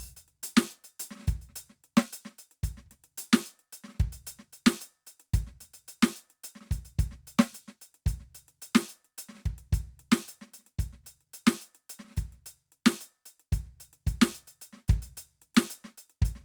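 Music, with no audible faults.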